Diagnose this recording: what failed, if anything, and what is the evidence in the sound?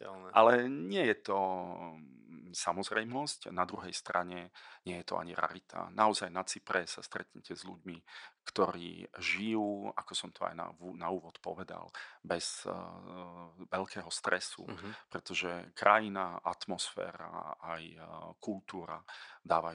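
Nothing in the recording points to a failure at any stage of the chain. The only background is a low room noise sitting about 55 dB below the speech, which belongs to the acoustic space around the microphone rather than to the system.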